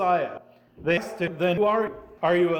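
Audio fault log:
0.38, 1.28, 1.58, 1.88 and 2.18 s: audio missing between chunks. Each point is an abrupt skip where roughly a fifth of a second of sound vanishes and the two sides butt together without silence, likely from a recorder dropping audio while switching between 0.5 s chunks.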